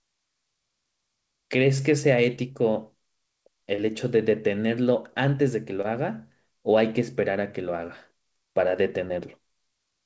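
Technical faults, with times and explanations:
2.36–2.39 s, 3.75–3.80 s, 5.82–5.86 s and 9.08–9.11 s: short concealed packet loss. Each time, a 20 ms piece of the call arrived too late for the decoder, so the receiver invented a fill from the preceding sound, extending its pitch or shaped noise, before blending back into real audio. Each patch lasts about 13 to 27 ms and is heard as a brief smear or wobble in a sound already band-limited to about 8 kHz.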